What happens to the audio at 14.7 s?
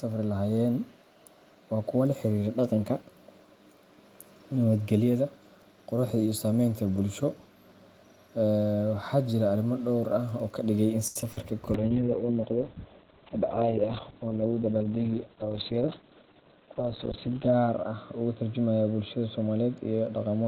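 Two things overlap at 14.7 s. The first is a call bitrate drop that sets in at 11.75 s and lasts to the end. The connection's bandwidth estimate fell, so the encoder had to squeeze the speech into far fewer bits. The sound points to a fall from around 32 kbps to about 6 kbps. At that rate Opus codes coarsely and cuts everything above 4 kHz, so the speech turns muffled and rough, losing the airy top end it had before.

The second is a jitter buffer speed-up running from 14.30 to 14.97 s. The receiver's buffer had built up more audio than it wants, so it caught up by snipping out tiny pitch-period chunks over and over, trimming roughly a tenth of a second in total. The pitch stays put, but the speech plays at about 112% speed and sounds briefly hurried, riding on top of the already muffled low-bitrate sound.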